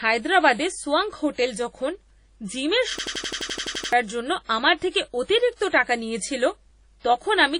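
Throughout the speech there is a washy, ringing quality with a hiss that swells and fades along with the talker, and the top end is missing: nothing is present above about 10.1 kHz. This is likely WMA compression at a low rate, with the damage consistent with a bitrate near 32 kbps. The transform codec spreads its quantisation noise over long blocks, so the noise smears through tens of milliseconds. At this rate the codec discards weaker spectral detail and the upper band entirely.

From 2.99 to 3.93 s the sound turns into a hard, mechanical stutter. A single 85 ms fragment repeats exactly, 11 times over, at about 11.7 Hz, until normal audio resumes with "জন্য আমার". This is a system hang loop. The computer or driver stalled while the sound hardware kept replaying the same ring buffer, which fits a 4096-sample buffer. Roughly a second of the real audio was lost in its place.

Shortly after "জন্য আমার", from 4.91 to 4.94 s, a brief hiss rises just before a sharp onset, and the attack itself sounds blunted and smeared. 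This is pre-echo, spanning 34 ms. The attack fell late inside a transform block, so quantisation noise sized for the loud part was spread evenly across the whole block. That noise filled the quiet moment ahead of the onset, where nothing masks it.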